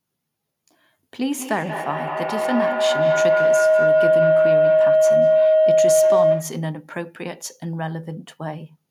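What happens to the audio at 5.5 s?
Feedback howl, 1.22 to 6.78 s. A mic-to-speaker loop gains on each pass. It rings near 700 Hz, about 10 dB above speech, with a loop delay of roughly 200 ms.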